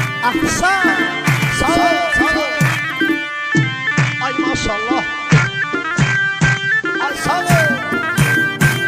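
From 0.88 s to 2.74 s the audio is heard twice: a full-band copy trails the original by around 150 ms, sitting a few dB lower, roughly 5 dB down. This is a doubled audio track. The second copy carries no reverb tail or room colour, and it cuts in and out abruptly at both ends, which points to the likely cause being the same signal captured again through a slower path, or two out-of-step copies left in an edit.

At 3.23 s the sound shifts to an analogue FM fallback, a digital radio blending to analogue, and it returns at 7.28 s. The receiver lost its digital stream and cross-faded over about 248 ms to the station's FM broadcast. During that stretch, hiss rises to roughly 30 dB below the programme, and the level drops by about 1 dB.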